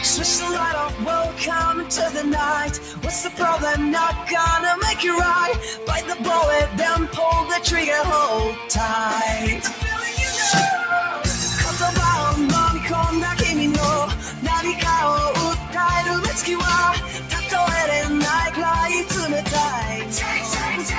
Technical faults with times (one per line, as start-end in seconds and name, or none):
0.00-20.98 noise suppressor applied to music or sounds
0.88-1.04 sound cut by the noise suppressor
2.78-3.05 sound cut by the noise suppressor
8.53-8.69 sound cut by the noise suppressor
9.65-9.82 sound cut by the noise suppressor
14.14-14.43 sound cut by the noise suppressor
15.60-15.76 sound cut by the noise suppressor
17.02-17.33 sound cut by the noise suppressor
19.87-20.14 sound cut by the noise suppressor